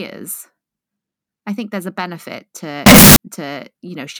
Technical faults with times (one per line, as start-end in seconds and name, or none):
2.86-3.16 float read as integer